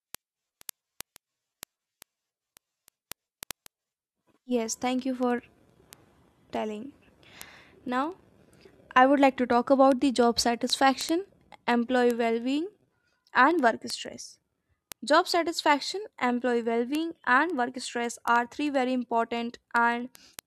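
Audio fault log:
0.15–20.47 s, word clock ticks: a steady patter of sharp little clicks, a few hundred in all, roughly every 0.07 s, uneven in strength, over the speech. That fits a receiver clock drifting roughly 300 ppm from the sender's, so a sample gets dropped or repeated each slip.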